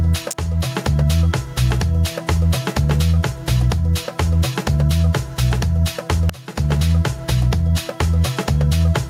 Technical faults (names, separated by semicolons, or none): gain pumping; electrical switching spike